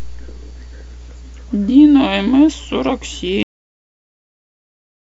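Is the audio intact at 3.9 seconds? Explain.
No. At 3.9 s the recording has already stopped. This is a cut-off end: the speech breaks off mid-sound at 3.43 s and stays in digital silence to the end of the clip. The final buffers were never written, so there is no decay or fade. The sound drops abruptly to nothing, and 3.9 s falls inside that dead span.

Mains hum runs under the speech up to the cut. It is a steady 60 Hz tone with low harmonics, about 20 dB below the speech. It sounds like power-line interference from a ground loop or a nearby transformer coupling into the signal path. At 3.9 s itself only silence remains, since the hum ends with the rest of the audio at the cut.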